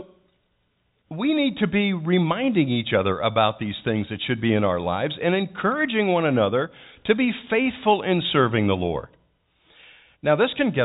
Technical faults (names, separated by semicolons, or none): none